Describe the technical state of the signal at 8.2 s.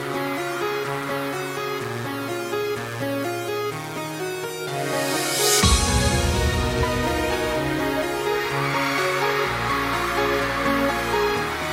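At 8.2 s the audio is intact, with no dropout, glitch or other fault.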